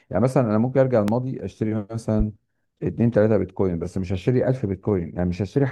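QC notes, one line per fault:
1.08–1.12 s and 2.20–2.23 s: loud pop. Each is a single sharp pop, about 15 dB and then about 10 dB above the speech, with speech continuing underneath. The likely cause is a sudden voltage step from a plug, switch or static discharge.
2.35 s: damaged data in a compressed stream. A brief blip where corrupted frames made the decoder lose sync and resume at the next valid frame header.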